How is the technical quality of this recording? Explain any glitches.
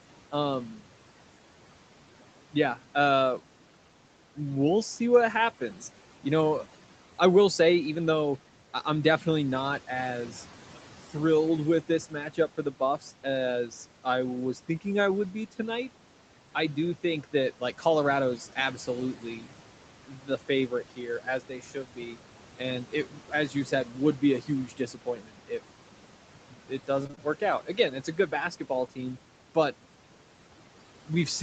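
The recording has three audible faults from the call chain, layered over room noise sitting about 17 dB below the speech and a codec band edge with nothing above 8 kHz.

Noise suppressor artifacts run through the whole clip. The suppressor pulls bands it judges to be steady noise down by about 12 dB, frame by frame, so the background dips in pauses and returns under speech. Unlike steady room noise, this background pumps with the talking.

Speech cut by the noise suppressor happens at 12.1–13.25 s (between "as thrilled with this" and "as I was thinking"), 20.08–20.3 s, 20.68–22.17 s, 22.59–25.51 s and 26.53–28.98 s. The suppressor mistook soft speech for noise and lowered it by up to about 12 dB. Endings and quiet syllables sound swallowed. This is a level dip, not missing audio.

Repeated packet loss (robotic sound) occurs at 27.03–27.2 s, inside the last suppression stretch. A cluster of short holes, the longest 22 ms, is filled by stretching the previous sound. 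The result is a choppy sound with pieces missing that is distinct from the smoother fading of the suppressor.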